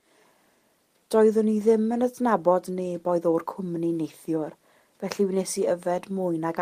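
No technical faults are audible anywhere in the recording.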